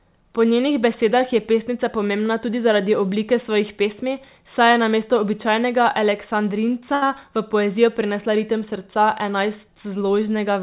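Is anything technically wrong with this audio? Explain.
Yes. From 6.94 to 7.03 s there is a short stall from a late packet. The jitter buffer ran empty, so the receiver stretched the last sound for about 78 ms until the packet arrived. Nothing is lost, but that moment is held unnaturally long with a slight buzz or dip, and everything after it plays 78 ms later. The band-limited sound, with nothing above 4 kHz, fits a G.711 A-law call path at 64 kbps.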